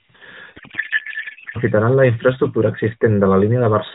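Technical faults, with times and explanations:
0.56–1.58 s, codec payload misread: AMR frames packed octet-aligned get unpacked as bandwidth-efficient, so the speech turns to garbled warble until "la infraestructura".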